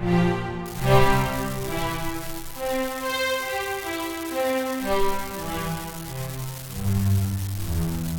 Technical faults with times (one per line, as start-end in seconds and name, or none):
0.66-8.19 unreliable data bit